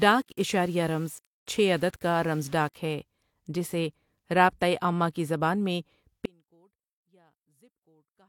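Speech clip. From 0 to 2.76 s the quieter passages sound grainy, with signal-following distortion around 30 dB below the speech, likely low bit depth without dither: 8-bit rounding. At 6.26 s the speech abruptly drops to a faint sound about 35 dB down until the end, likely an audio dropout to a faint residue.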